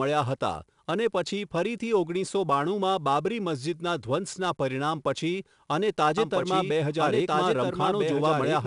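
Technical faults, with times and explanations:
Throughout: 4-bit ADPCM compression. Every loud stretch carries a gritty hiss that rises and falls with the level, because each sample is coded as a coarse 4-bit step from a prediction, leaving broadband error riding some 20 to 30 dB under the signal. Sharp onsets sound roughened where the step size lags behind the attack. The damage is plainly audible, fitting a rate near 89 kbps, and nothing exists above 10.7 kHz. On a spectrogram, a noise haze fills the gaps between harmonics and a hard ceiling sits at 10.7 kHz. On the waveform, fast attacks look slightly jagged.
6.18 s to the end: doubled audio track. A second full-band copy of the speech enters abruptly and runs to the close, trailing about one and a half seconds behind and sitting about 5 dB quieter. It has no reverb tail or room colour, so it sounds like a separate overlapping playback rather than an echo. 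The likely cause is a second, slower capture path or an edit that left two misaligned copies in the mix. On the waveform, the amplitude steps up sharply at 6.18 s. The spectrogram shows a fainter duplicate of earlier speech patterns laid over the current ones.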